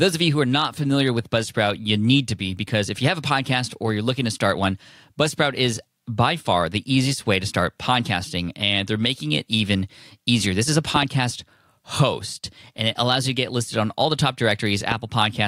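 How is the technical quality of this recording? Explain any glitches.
The recording is marred by loud pops. From 10.96 to 11.05 s, two sharp pops land in quick succession, and from 14.92 to 14.94 s there is a single one, each roughly 10 dB above the speech, which carries on underneath. These are likely voltage spikes, from a switch, connector or static, that were briefly shaped by the downstream circuitry.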